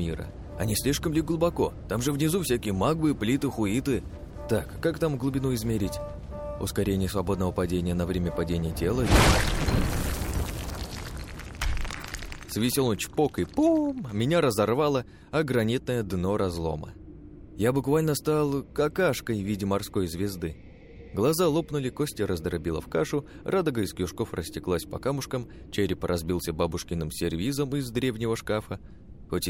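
No technical faults can be heard anywhere in the audio.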